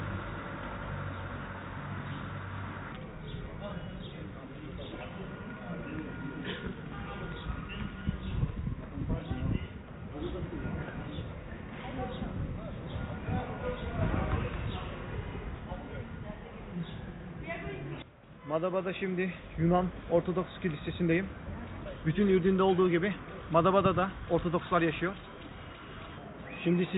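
No technical faults can be heard anywhere in the audio; the signal stays continuous and intact throughout.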